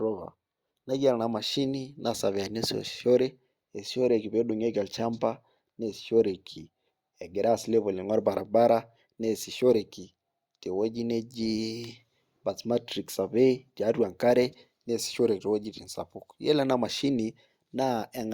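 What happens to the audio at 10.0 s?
Nothing goes wrong at 10.0 s: the speech carries on intact through that moment, with no dropout, click, distortion or other fault to be heard.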